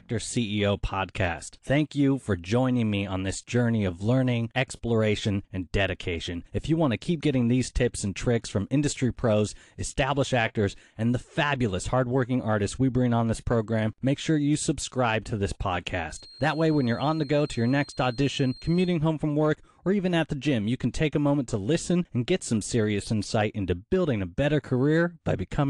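From 16.05 to 19.0 s a thin, steady whistle near 4.2 kHz sits well beneath the speech, swelling and fading slowly in level. This feedback whistle likely comes from a loudspeaker-to-microphone loop held right at its threshold, sustaining one tone without building.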